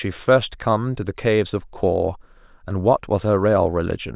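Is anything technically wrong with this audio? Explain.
No, the signal shows no technical faults anywhere in the clip.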